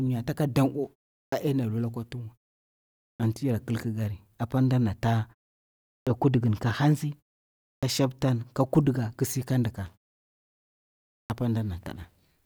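At 1.28, 3.15, 6.02, 7.78 and 11.25 s, speech returns with a clipped start after a pause. The output device sleeps through each silence and wakes late, cutting 44 to 49 ms from the onset. Muted pauses only quiet the gaps, but this removes speech.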